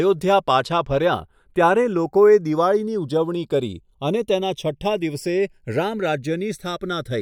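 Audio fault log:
Throughout, channels drifting apart. The offset creeps to about half a millisecond, fitting clocks roughly 70 ppm apart. In mono, sweeping comb notches sound like slow flanging.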